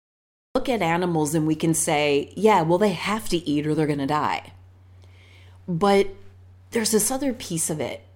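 A cut-off start runs from 0.0 to 0.55 s: digital silence, then the speech enters abruptly at 0.55 s mid-sound. Capture began late, so the opening is clipped away. The onset has no natural attack or fade-in and lands as a hard edge.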